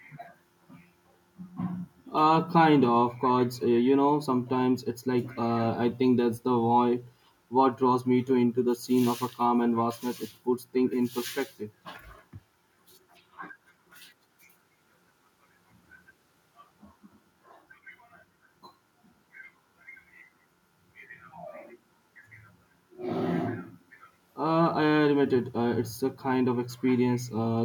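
Nothing stood out on listening to this speech recording.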